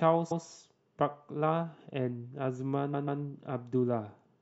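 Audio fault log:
0.30–0.44 s, repeated frames: a 139.3 ms block plays once more, a short stutter that lengthens the audio by 139.3 ms. A span that length fits a run of about six compressed frames being written or sent twice.
2.93–3.21 s, repeated frames: the same 139.3 ms block length recurs, this time played twice more, so the stutter is longer and the audio gains 278.6 ms. The decoder is again playing duplicated compressed frames.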